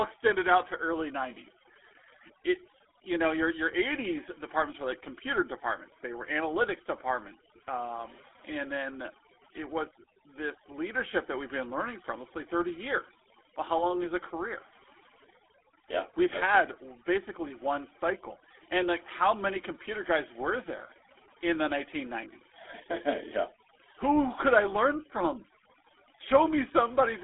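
Overdone noise removal runs through the whole speech recording: the noise reduction is set so aggressively that frequency bands sitting near its noise estimate get pulled far down or shut off, taking quieter parts of the voice with them. The background drops and breaks up into twinkling specks. A GSM full-rate codec also colours the entire clip, and its damage is plainly audible: the voice is rebuilt from a vocal-tract model driven by sparse, regularly spaced pulses, which gives it a buzzy, gravelly roughness that fits a 13 kbps GSM full-rate stream. The sound is confined to a telephone band of roughly 300 Hz to 3.5 kHz, with nothing above 3.8 kHz.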